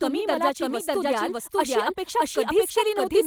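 A doubled audio track runs through the whole recording: a second full-band copy of the speech trails the original by roughly 0.7 s, at about the same level, so every phrase is heard twice, clearly out of step. The copy is dry, with no decay or room colour, so it sounds pasted on rather than reflected. The cause is likely a second capture of the same signal through a slower path that was mixed back in.

Clock drift between sender and receiver is also present throughout. The sending device's audio clock runs about 4 percent faster than the receiver's, so audio arrives a little quicker than it can be played out. The receiver's jitter buffer keeps filling, and it has to keep discarding small pieces to stop the delay growing. That constant mismatch produces small, irregular timing hiccups across the clip.

Repeated timing corrections follow directly from that drift, from 0.09 s, just after "तुम्ही मला", through to 3.21 s. 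To keep up with a sender running at 104 percent speed, the receiver repeatedly cuts short fragments, all in the same direction but at uneven spacing. Each edit is tiny, dropping only a sliver of sound.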